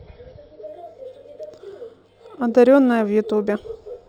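From 0.67 s to the end at about 4.09 s, this speech clip shows imaging from linear upsampling: its rate was raised by straight-line interpolation between samples, which fits a 12 kHz source brought up to 44.1 kHz. That crude filter dulls the top of the original band and leaves faint mirrored copies of the spectrum between 6 kHz and 12 kHz, roughly 40 dB below the signal, heard as a light metallic shimmer on sibilants.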